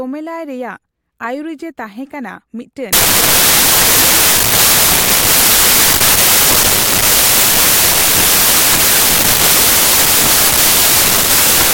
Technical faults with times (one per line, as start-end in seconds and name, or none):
2.93-11.73 samples built from the wrong bytes